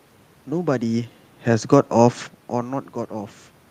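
Listening through the recording, nothing stood out as a technical fault.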